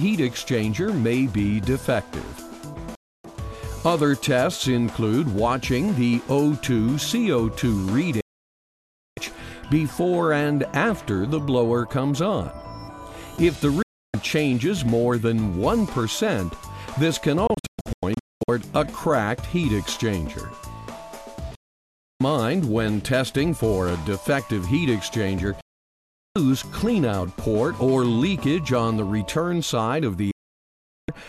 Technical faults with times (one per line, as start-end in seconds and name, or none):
2.95-3.25 digital broadcast dropout
8.21-9.18 digital broadcast dropout
13.82-14.14 digital broadcast dropout
17.47-18.49 digital broadcast dropout
21.55-22.21 digital broadcast dropout
25.61-26.36 digital broadcast dropout
30.31-31.09 digital broadcast dropout